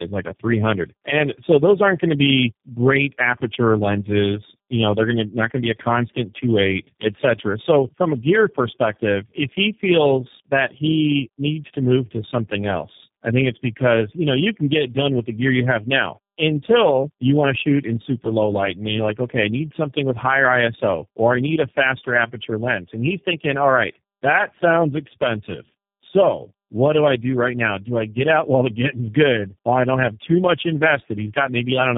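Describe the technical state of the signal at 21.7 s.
At 21.7 s the speech carries tandem speech coding, present across the whole clip. It sounds like three successive low-rate speech codecs, each re-encoding the previous one's degraded output. The result is rough, muffled, warbly speech with nothing above 3.7 kHz.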